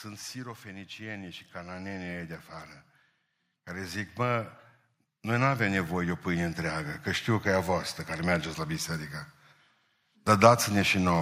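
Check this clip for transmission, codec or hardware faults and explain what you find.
Automatic gain rising occurs twice. From 0.61 to 2.41 s, then 3.73 to 7.35 s before "că e a voastră", gain climbs about 9 and 10 dB. Speech and background swell together.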